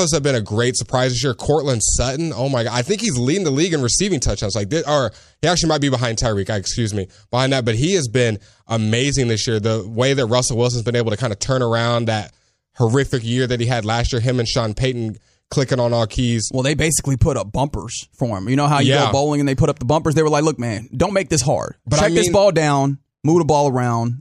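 Nothing technically wrong turns up anywhere in this recording of speech, so there's no fault to point to and no cause to explain.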